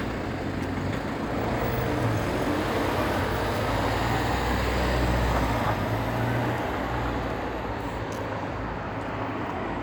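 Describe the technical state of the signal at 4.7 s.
At 4.7 s the signal is intact, with no audible fault at that point in the sound.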